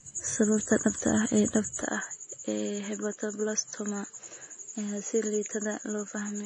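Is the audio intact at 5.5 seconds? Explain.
No. From 1.82 s onward, right after "dhabta ah ee dhabta", the sound turns abruptly duller and about 5 dB quieter, with nothing above 7.6 kHz and a faint new noise floor. This is likely an input switched to a poorer device. The sudden step with no gap sets it apart from compression, which stays constant.

Throughout the clip there is also plainly audible AAC compression, with a smeared, warbling texture and nothing above 9.8 kHz. That fits low-bitrate AAC-LC at about 32 kbps.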